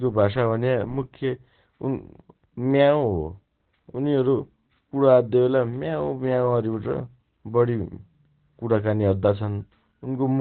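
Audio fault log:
Throughout, Opus compression: the encoder was likely running in its speech (SILK) mode at a very low rate, which fits a bitrate of around 12 kbps, with the band cut to narrowband. Nothing is heard above 4.4 kHz, so the speech sounds muffled and boxed-in, with no air or sibilant detail. The heavy coding damage also gives the speech a hoarse, rough edge, as the codec approximates it with few bits.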